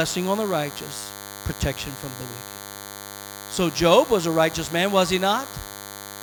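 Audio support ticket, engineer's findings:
Steady thin buzz under the speech for the entire clip. Fixed 100 Hz fundamental with dense harmonics, roughly 15 dB below the speech. DECT cordless phone buzz: nearby handset or base sends radio bursts every 10 ms, and the audio input stage rectifies them.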